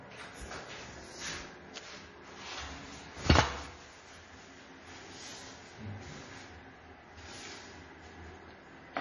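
From start to finish the sound has a watery, swirling texture, with nothing above 11.4 kHz. The likely cause is heavy MP3 compression, at a data rate that fits a very low bitrate near 32 kbps. Starved of bits, the encoder cut the treble flat and dropped weak frequency components that blink on and off between frames. A spectrogram shows a hard ceiling at 11.4 kHz and a mottled, holey pattern of flickering patches below it.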